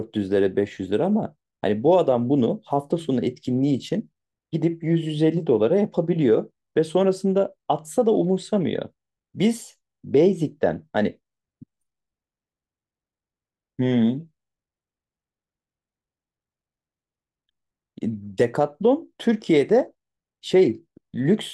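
No technical faults can be heard in this speech recording. There is no point in it that calls for a timestamp or a note.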